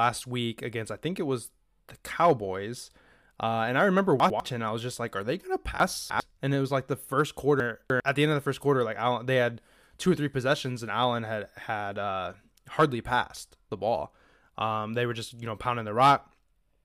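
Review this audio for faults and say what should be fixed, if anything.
Chunks out of order in three spots: 4.2 to 4.4 s after "and I remember", 5.8 to 6.2 s after "are they going to", and 7.6 to 8.0 s after "was like the first". A 100 ms chunk lands one or three slots late, so the speech jumbles. Have the writer or jitter buffer reorder chunks by sequence number before playout.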